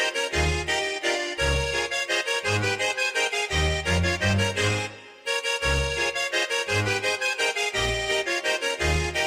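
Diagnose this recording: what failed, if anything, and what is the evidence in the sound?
Nothing in the signal chain audibly failed: no stage, from the wiring through conversion, processing and storage to playback, leaves a mark that can be heard in this recording.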